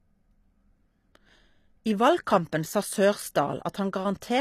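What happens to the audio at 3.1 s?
At 3.1 s the speech carries the same coding damage that runs through the whole recording: a plainly audible HE-AAC compression signature, with nothing above about 14.9 kHz. The treble sounds synthetic rather than captured, likely because spectral band replication is copying lower bands upward and shaping them with a coarse envelope. Its harmonics do not line up with those below the crossover, so sibilants turn gritty and lispy. The degree of damage points to a low bitrate, around 24 kbps.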